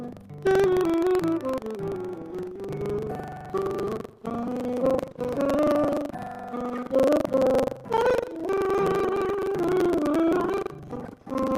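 The program filling the playback ring buffer and the hardware reading it have drifted until they cross inside every period, so this audio has buffer tearing throughout. Roughly a sixth of each buffer replays sound from about a tenth of a second earlier, joined hard at both edges. The result is a steady rattling buzz at 23.4 Hz, which fits a 2048-sample buffer. At 5.09 to 5.19 s, a burst of packet loss left about 80 ms that the receiver filled by carrying the last sound forward and fading it. The audio then picks up again with a further 80 ms skipped.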